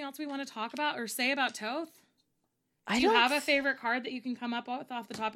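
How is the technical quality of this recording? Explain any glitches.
Nothing technical stood out on listening to this speech recording, so there are no glitches to explain.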